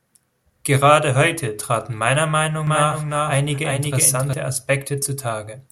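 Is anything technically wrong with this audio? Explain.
Yes. From 2.67 s to 4.33 s, right after "heute traten meiner", the speech has a doubled audio track. A second full-band copy runs roughly 400 ms behind the original, at about 5 dB lower. It has no decay and no room colour, so it is not an echo. It switches on and off abruptly at those times. The likely cause is the same signal reaching the mix twice, once through a slower path.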